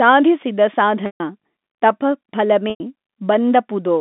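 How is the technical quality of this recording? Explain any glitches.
Two dropouts stand out, both packet loss with pitch repetition. At 1.06 s about 140 ms goes missing, which fits seven 20 ms packets, and at 2.70 s another 100 ms drops. The receiver bridges each hole by looping the last pitch period, so you get a brief held buzz that fades out within about 50 ms, then silence until the speech cross-fades back in. All of it sits inside a 200 Hz to 3.6 kHz G.711 phone band.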